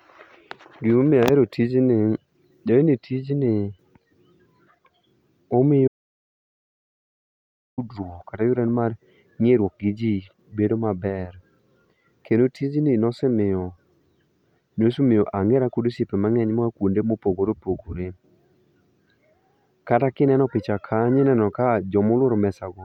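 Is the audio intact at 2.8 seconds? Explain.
Yes, the speech at 2.8 seconds plays through intact, with no dropout, click, distortion or other fault at that moment.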